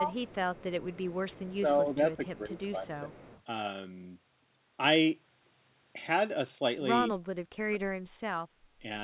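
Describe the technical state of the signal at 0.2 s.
At 0.2 s there is an echo leak, from 0.13 to 0.35 s: a loudspeaker's echo canceller likely let some of the far end's own speech return down the line. It sounds like a faint copy of the speech trailing about 160 ms behind.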